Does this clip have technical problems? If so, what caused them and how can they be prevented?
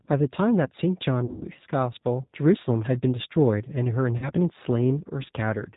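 Yes. The whole 5.8-second speech clip carries plainly audible G.729 codec damage. Nothing above 4 kHz survives, and the voice is rebuilt from a filter, a pitch predictor and sparse pulses, so it sounds rough and synthetic, which fits an 8 kbit/s codec. Prevention: use a wideband codec such as G.722 or Opus where bandwidth allows.

VoIP packet loss concealed by the speech codec occurs at 1.25–1.46 s, where about 140 ms is missing across 160 ms with a longest gap of 100 ms, and again at 4.18–4.30 s, with 40 ms missing. The decoder extrapolates from the last pitch and filter with falling gain, and the following speech stays weak briefly. Prevention: add forward error correction, an adaptive jitter buffer and network QoS for voice traffic.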